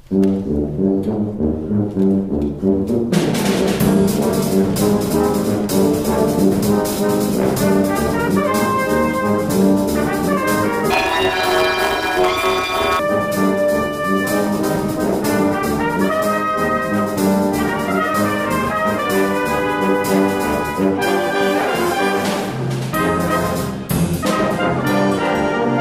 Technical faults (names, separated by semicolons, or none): planar audio read as interleaved